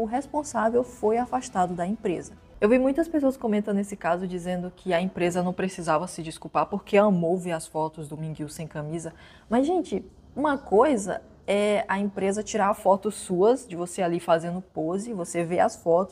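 No technical faults can be heard anywhere in the signal.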